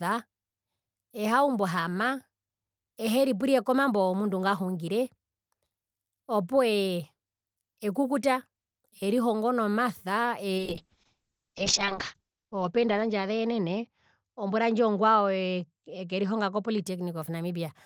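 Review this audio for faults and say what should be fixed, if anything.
From 10.59 s to 16.91 s there is a call bitrate drop: the audio turns rough and watery, and the top end narrows from about 20 kHz to 8 kHz. This fits the encoder being pushed from about 32 kbps down to about 6 kbps, and it stays at its worst for about 1.4 s. Packet loss would produce gaps or robotic repeats. Here the sound stays continuous and is simply coded coarsely. Prevent it by giving the call steadier bandwidth or setting a higher minimum encoder bitrate.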